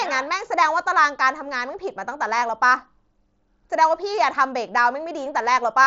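No technical faults can be heard in the speech. It comes through a Bluetooth mSBC headset codec, so nothing is present above about 7.7 kHz, and there is a light graininess on louder moments.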